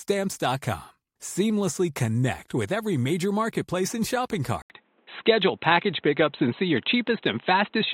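Speech; after "major marketplace and shopping", an 80 ms gap at 4.62 s gives way to duller sound, capped at 4 kHz, with a level shift and new background noise. This is likely an input switched to a poorer device, not simple filtering, which wouldn't add noise.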